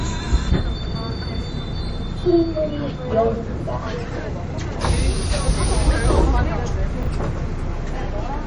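Throughout the audio there is a hard treble ceiling at 10.5 kHz, with a watery, swirling texture and smeared attacks. The likely cause is MP3 compression at a low bitrate, which fits about 40 kbps. On a spectrogram, everything above the cut-off is empty, and patchy high-frequency bins flicker on and off between frames. From 7.03 to 7.07 s there is a brief jumbled stretch: chunks out of order, where a 10 ms piece plays three chunks late. The waveform shows three abrupt discontinuities, and the spectrogram shows thin vertical broadband lines at each join.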